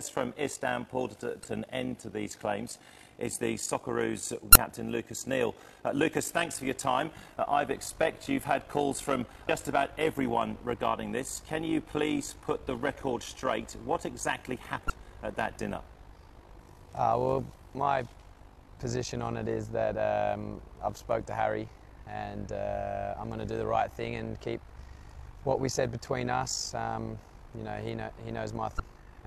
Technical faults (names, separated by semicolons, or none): overlap-add ripple